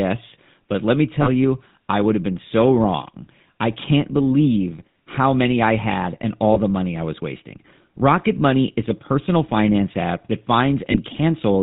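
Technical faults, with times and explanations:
Throughout, GSM full-rate codec: the speech carries a clearly audible buzzy, gravelly roughness with nothing above 4 kHz. This fits the 13 kbps full-rate coder, which models the vocal tract and drives it with sparse, regularly spaced pulses instead of the real excitation.
1.22–1.29 s, 6.54–6.58 s and 10.92–10.98 s, lost GSM frames: after "let me", after "many I had and" and after "personal finance app that", the sound briefly hangs as a rough metallic ring. The decoder repeats the settings of the last good frame, which fits gaps of about 40 ms at first and about 20 ms later.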